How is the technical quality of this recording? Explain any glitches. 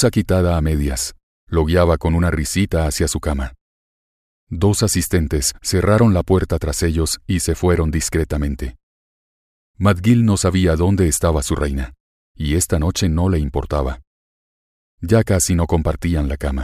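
Nothing audible to flag: no glitches, dropouts or level problems anywhere in the recording.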